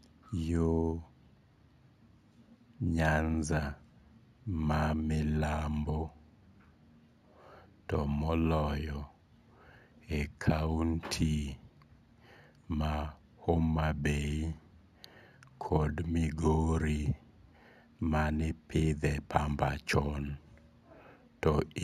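Right from the start and for the whole clip, the speech carries imaging from linear upsampling. It looks like it was taken up from 16 kHz to 48 kHz by joining samples with straight lines, which barely filters anything. So the top of the original band sounds dulled, and a mirrored copy of the spectrum sits between 8 kHz and 16 kHz, roughly 30 dB below the signal. You hear it as a faint metallic shimmer riding on the sibilants.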